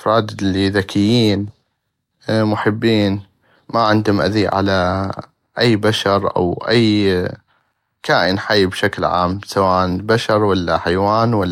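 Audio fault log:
No fault found in this speech clip.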